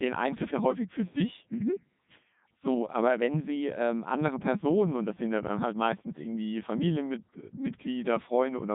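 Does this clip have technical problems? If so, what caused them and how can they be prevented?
Yes. The whole clip of speech passes through a Codec 2 vocoder, and the damage is heavy. The decoder does not keep the waveform. It rebuilds the voice from sine waves using only pitch, voicing, energy and a spectral envelope. So the speech sounds robotic and buzzy throughout. Nothing is heard above 3.8 kHz. The quality points to the codec's top rate, around 3.2 kbit/s. To prevent it, record or transmit over a waveform codec at an adequate bitrate instead of a low-rate vocoder.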